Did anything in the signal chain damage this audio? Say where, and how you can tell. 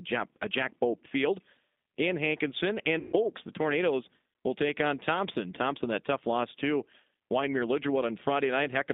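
Yes, at two stages. At the codec stage, the whole speech clip passes through the G.729 codec, heard as the G.729A variant at 8 kbit/s. Everything outside roughly 200 Hz to 3.7 kHz is gone, and the voice has a plainly audible rough, synthetic grain, because each 10 ms frame is rebuilt from a filter, a pitch predictor and a few pulses. On a spectrogram, energy stops at a flat ceiling near 3.7 kHz, with smeared, blocky harmonics below it.

At the network stage, there is VoIP packet loss concealed by the speech codec from 2.99 to 3.13 s. The gap is 140 ms, which fits about fourteen lost 10 ms frames. The decoder repeats its last pitch and filter state, so the speech turns into a stretched buzzy tone or coloured noise that weakens frame by frame. A waveform shows a decaying envelope. A spectrogram shows a frozen, steady spectrum in place of moving formants, and the speech stays weak just after 3.13 s.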